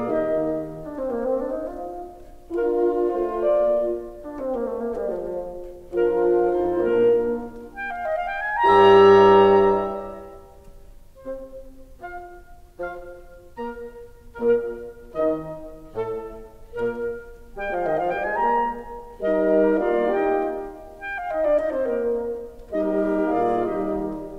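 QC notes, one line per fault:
The music signal holds steady and continuous, with no audible technical faults anywhere in it.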